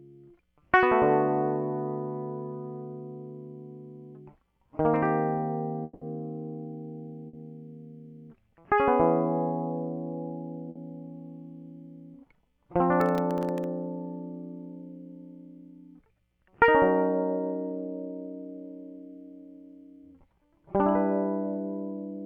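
At 5.83 to 6.04 s the music stops moving and the last sound is stretched into a smeared, fading buzz for about 180 ms. It then picks up further on with that section gone. This is a long network dropout, likely a stall in arriving audio that the receiver concealed. On a spectrogram the harmonic detail turns into flat horizontal streaks. The waveform shows a repetitive, decaying envelope.

Two shorter gaps follow, at 7.27 to 7.36 s and 10.69 to 10.78 s. Each is a burst of packet loss. About 60 ms of audio never played, and the receiver held the preceding sound and turned it down, so a brief droning blur interrupts the music. Both appear as short, fading horizontal smears with a discontinuity where playback rejoins.

From 13.01 to 13.64 s a gritty crackle tears across the music. This is processor overload crackle. Around fifteen buffer deadlines were missed, each leaving a tiny hole of silence, which fits a buffer of well under a millisecond. 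The waveform shows hard-edged notches. The spectrogram shows scattered thin vertical broadband lines.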